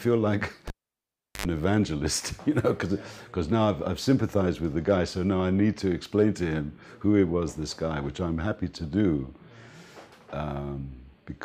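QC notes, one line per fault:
0.68–1.46 s, cable pulled and plugged in: pop, about 0.74 s of near silence, then an 85 ms burst of 50 Hz buzz as the plug tip touches, and a second pop.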